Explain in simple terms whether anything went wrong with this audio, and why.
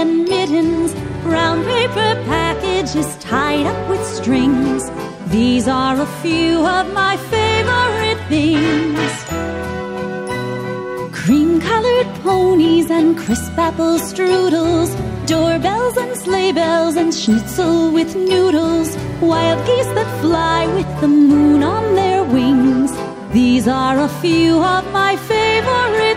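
From 15.76 to 19.67 s a faint, steady high whine sits under the sound, built on 1 kHz and loudest at 2 kHz. This is USB whine: the bus's 1 ms power pulses leak into the audio. Mains hum, by contrast, is a much deeper buzz.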